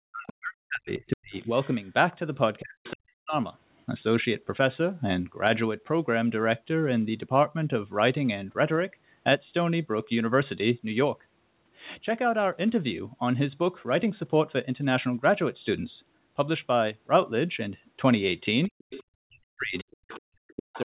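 A speech recording carries two call-processing faults. Speech suppressed in double talk occurs at 0.0–1.49 s, 2.61–3.35 s and from 18.68 s to the end, where the talker's level dips by as much as around 40 dB in patches. This is likely an echo canceller that could not tell the near talker from loudspeaker echo and so attenuated everything while both sides spoke. The other side's voice is leaking through at 0.28–0.33 s, 0.94–1.88 s, 2.84–2.91 s, 18.78–19.04 s and 19.76–20.82 s, sitting roughly 30 dB below the speech in the first two stretches, about 20 dB below at 2.84–2.91 s, and roughly 15–20 dB below near the end. The likely cause is residual loudspeaker pickup that the canceller failed to remove. Throughout, the audio band stops near 4 kHz, as expected from a G.711 call path.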